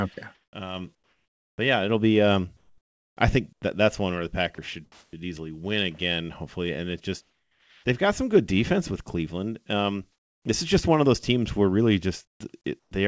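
From 0.35 to 1.58 s, before "but yeah it'll be", the background turns steady and featureless. This is comfort noise in place of the background, likely from discontinuous transmission. It recurs at 2.57 to 3.62 s, at 7.21 to 7.84 s (about 4 dB quieter), and at 10.12 to 10.45 s (about 5 dB quieter). At 3.53 to 3.62 s, about 50 ms of sound is dropped by the voice detector. The likely cause is the sender's detector mistaking it for background. From 4.55 to 5.19 s, sound is chopped by the voice detector. Quiet edges likely get swapped for fill. At 12.25 to 12.40 s, just after "those teams where really", sound drops again. Comfort noise then runs to 12.91 s. Throughout, the codec band stops at 8 kHz.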